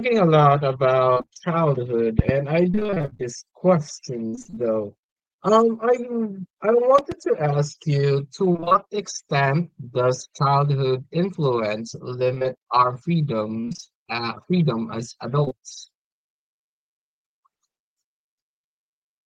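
Speech with bursts of repeated packet loss (robotic sound) at 1.13–1.41, 2.71–3.21, 4.27–4.58, 8.52–8.76 s (just after "you to"), 12.34–12.46 and 13.60–13.92 s. In each burst roughly half the span was lost in gaps of about 20–25 ms, with one reaching 63 ms in the 4.27–4.58 s burst, and each gap was patched by extending the previous sound, giving a choppy, robotic texture. On a spectrogram these stretches show a comb of short blocks with frozen, repeated harmonics. A loud pop lands between 6.98 and 7.14 s as two sharp clicks peaking about 10 dB above the speech, likely from a voltage transient such as a switch, static or driver glitch. It appears as two tall spikes on the waveform and two thin full-band vertical lines on the spectrogram, with the speech continuing beneath. Right after "freedom as", two back-to-back short concealed packet losses at 15.44 and 15.48 s, each about 20 ms of missing audio, were filled by extrapolation and blended back, producing a brief smear across roughly 15.44–15.53 s that shows as slightly blurred, flattened harmonics rather than a clean gap.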